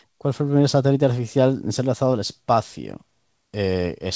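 No technical faults can be heard anywhere in this speech. It comes through a call path working normally, with nothing above 8 kHz, which fits a wideband call codec.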